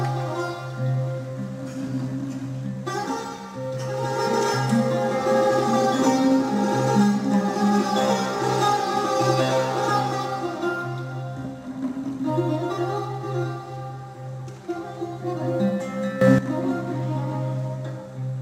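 At 16.21 s the level leaps by about 12 dB in a single step, sound and background noise together, and stays there until 16.38 s: a sudden gain jump, likely a gain change applied without a ramp. The waveform shows an abrupt envelope step, and the spectrogram a brightened block with vertical edges.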